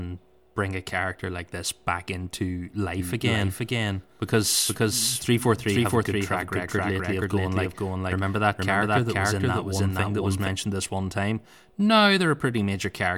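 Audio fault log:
3.00 to 10.48 s, doubled audio track: from about 3 s the speech gets a second, full-band copy of itself trailing around half a second behind, at roughly the same loudness, so everything seems spoken twice over itself. It's not room echo, since the copy has no decay or room colour and switches on and off abruptly at both ends. The likely cause is the signal being captured a second time through a slower path, or an edit leaving two out-of-step copies in the mix.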